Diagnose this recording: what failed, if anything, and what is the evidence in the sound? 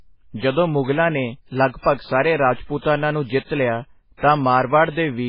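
The codec stage let this one down. Across the whole speech clip there's nothing above about 5.2 kHz, plus a watery swirl and smeared consonants, so heavy MP3 compression is the likely culprit. It's probably running near 16 kbps, where the encoder chops off the treble and drops weak frequency lines from frame to frame.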